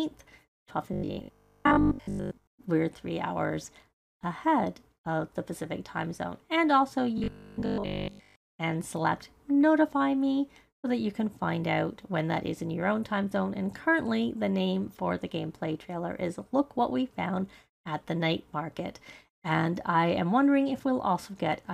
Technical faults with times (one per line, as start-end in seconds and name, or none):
0.93-2.47 robotic sound from repeated short buffers
7.18-8.54 robotic sound from repeated short buffers